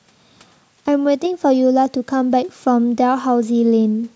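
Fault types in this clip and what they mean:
There are no fault types in this clip, so there is nothing to explain.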